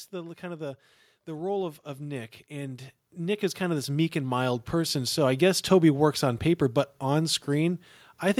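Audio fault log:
0.1–5.25 s, automatic gain rising: the automatic gain control judged the input too quiet and lifted its gain by about 18 dB over roughly five seconds, so the speech and the background noise floor swell upward together rather than the speech alone getting louder.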